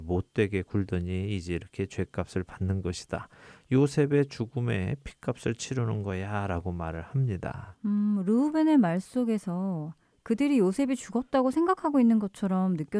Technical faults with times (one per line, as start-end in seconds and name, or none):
none